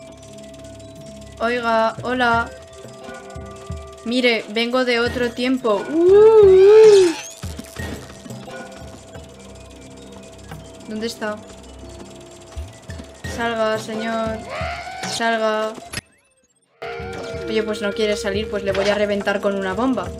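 At 15.99 s the sound abruptly collapses to a faint residue roughly 30 dB down, returning at 16.82 s: an audio dropout to a faint residue, likely a brief signal loss with the path left live.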